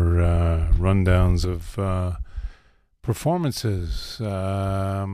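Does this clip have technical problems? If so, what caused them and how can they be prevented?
Yes, there's a sudden gain jump at 1.45 s. The level drops by about 6 dB from one sample to the next and stays down right to the end of the clip, with the speech and the background noise falling together. The likely cause is a gain setting or a one-bit shift being applied instantly, with no ramp. To prevent it, always fade gain changes in over a few milliseconds instead of switching them at a single sample.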